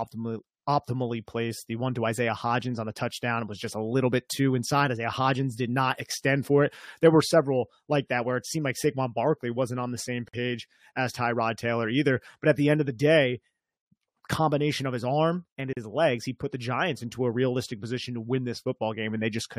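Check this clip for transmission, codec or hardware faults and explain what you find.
Two faults, both the same kind: a gap at a join of encoded pieces. At 10.28 to 10.34 s, after "wasn't on the same", a 52 ms silence opens; at 15.73 to 15.77 s, between "of his arm and" and "legs he put the", a 38 ms one. Separately encoded segments were spliced with their encoder start delay and final-frame padding left in. The speech cuts out with smeared edges and then resumes exactly where it stopped. Because nothing is skipped and nothing is filled in, this differs from a packet-loss dropout.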